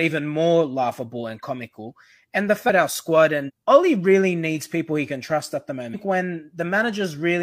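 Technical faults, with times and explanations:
2.65 s, 3.44 s and 5.90 s, compressed frames skipped: speech lurches forward with a brief smeared blip as whole 46.4 ms frames drop, losing roughly 0.7, 0.5 and 0.5 s.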